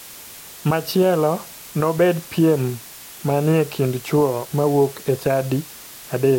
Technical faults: low bit depth with dither

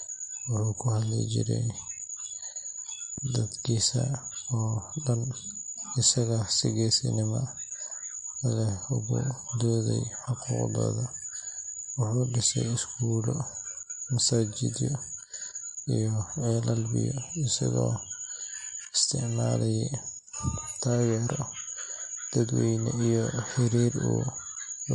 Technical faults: MP3 compression; loud pop

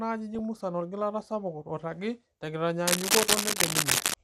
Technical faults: MP2 compression; DAB burbling; cable scratch noise

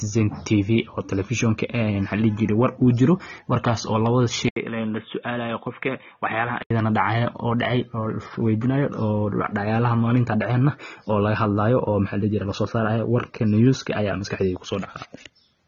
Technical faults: AAC compression; input switched to a poorer device

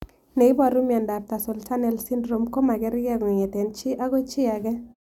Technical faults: none

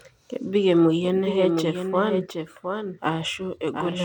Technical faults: doubled audio track

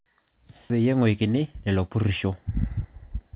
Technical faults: skip ahead; jitter buffer speed-up

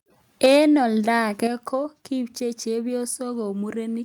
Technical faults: microphone overload; microphone volume stepped down

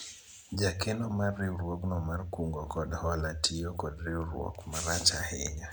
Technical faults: none

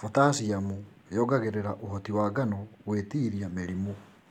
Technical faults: none

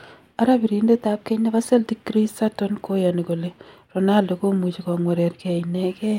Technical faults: drift correction step

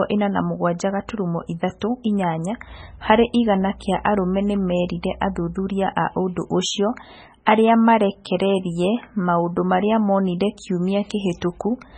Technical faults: MP3 compression

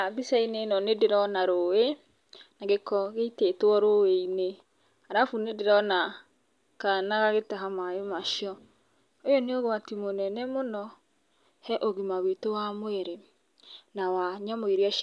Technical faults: none

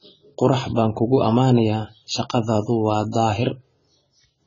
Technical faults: AAC compression

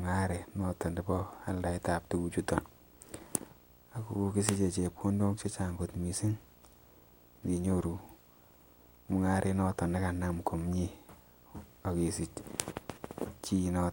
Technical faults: video or display buzz

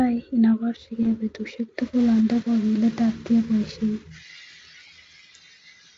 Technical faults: VoIP packet loss concealed by the speech codec

